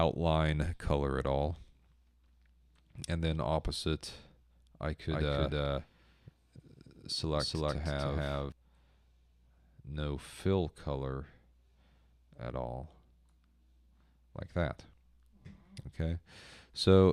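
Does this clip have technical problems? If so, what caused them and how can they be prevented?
Yes. From 5.10 s to 8.52 s there is a doubled audio track: a second, full-band copy of the sound trails the original by roughly a third of a second, at about the same level. It carries no decay or room colour and switches in and out abruptly at both ends. The likely cause is the signal being captured again through a slower path and mixed back in. Prevent it by monitoring each source through only one route and muting duplicate inputs or returns.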